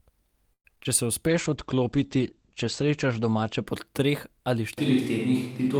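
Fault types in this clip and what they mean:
Repeated packet loss (robotic sound): From 0.53 to 0.87 s, six quick dropouts, the longest 112 ms, get patched by stretching the last sound, so nearly half that stretch turns choppy and robotic.
Jitter buffer slow-down: Between 1.27 and 2.09 s the receiver repeats tiny slices to rebuild its reserve, adding 56 ms, so speech drags at 94% speed without shifting pitch.
Call bitrate drop: From 1.29 to 3.72 s, just before "po treh ali", the encoder falls from 40 to 13 kbps and bandwidth shrinks from 20 kHz to 8 kHz, sounding muffled and rough.
Switch to a distant microphone: Right after "po treh ali", from 4.78 s to the end, the voice abruptly turns roomy and hollow, level barely changing, room noise about 30 dB down; a farther mic is the likely cause.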